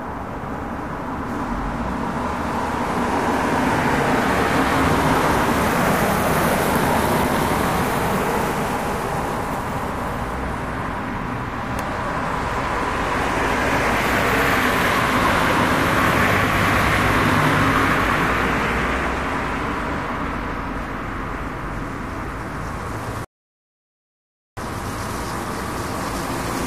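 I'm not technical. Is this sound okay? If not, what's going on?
No. At 23.25 s the sound suddenly drops to silence, then picks up at 24.57 s exactly where it left off, with nothing missing. This is a rebuffering stall: the player ran out of downloaded audio and paused, adding about 1.3 seconds of dead air.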